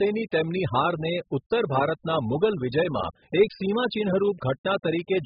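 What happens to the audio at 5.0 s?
At 5.0 s you're hearing the same thing that runs through the whole clip: likely heavy AAC compression. Nothing survives above 5 kHz, and the sparse quantising at what sounds like roughly 8 kbps leaves the speech dull, smeared and warbly, with fizzy sibilants.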